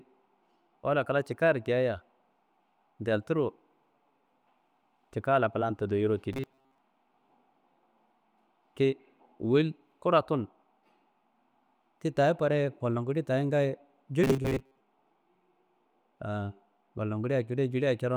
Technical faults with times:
6.33-6.78 robotic sound from repeated short buffers
14.24-14.80 robotic sound from repeated short buffers

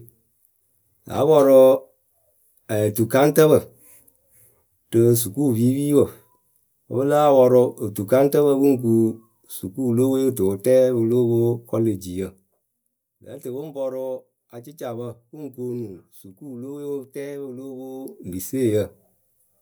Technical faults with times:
11.86-13.22 zipper noise
17.90-18.26 zipper noise

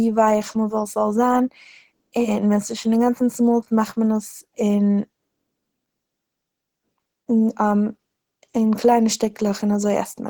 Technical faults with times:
0.00-10.29 Opus compression

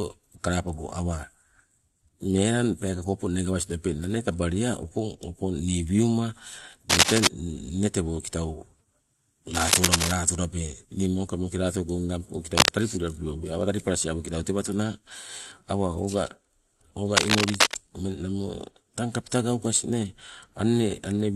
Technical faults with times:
6.89-7.28 cable scratch noise
9.54-10.12 cable scratch noise
12.57-12.75 cable scratch noise
17.16-17.74 cable scratch noise

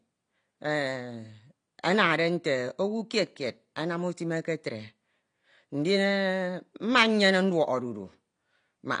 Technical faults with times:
0.00-9.00 AAC compression

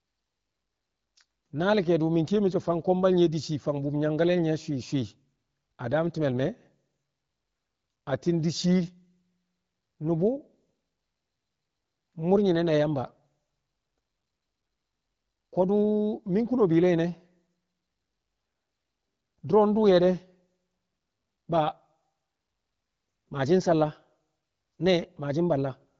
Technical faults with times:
none

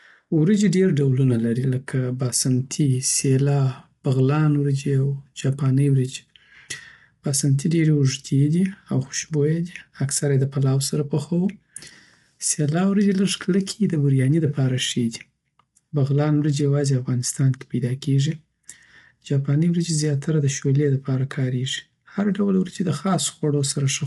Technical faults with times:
0.00-24.07 low-delay AAC compression

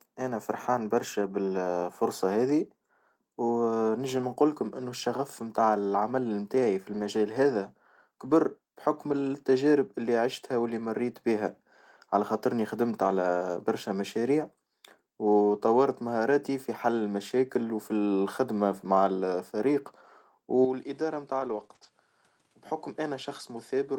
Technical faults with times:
1.21-1.23 lost packet rebuilt from error correction
4.17-4.23 lost packet rebuilt from error correction
6.93-7.03 lost packet rebuilt from error correction
8.25-8.31 lost packet rebuilt from error correction
9.11 lost packet rebuilt from error correction
13.03-13.09 lost packet rebuilt from error correction
20.65-23.99 input switched to a poorer device
21.39-21.89 lost packet rebuilt from error correction
21.67-21.83 short concealed packet loss

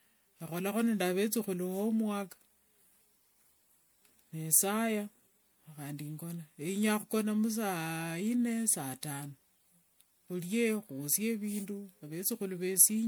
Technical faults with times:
0.00-13.07 generation loss

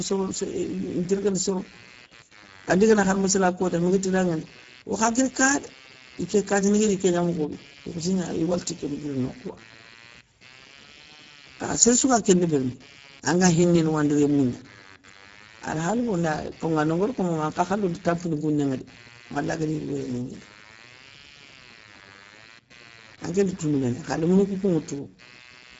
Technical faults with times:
0.00-25.80 computer activity noise
0.00-25.80 Speex codec

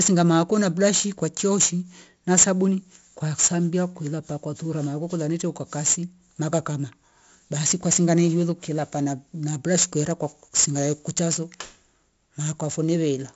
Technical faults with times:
0.00-13.36 4-bit ADPCM compression

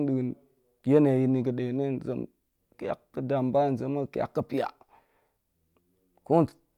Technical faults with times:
none

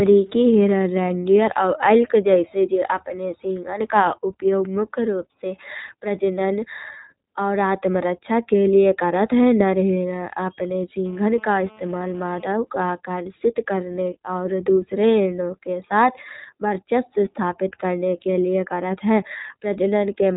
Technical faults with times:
0.00-20.36 iLBC codec
11.06-12.45 GSM phone buzz

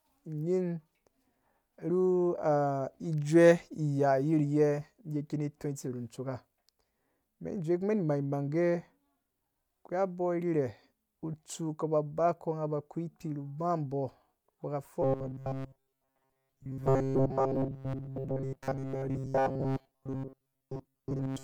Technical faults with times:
15.02-21.43 robotic sound from repeated short buffers

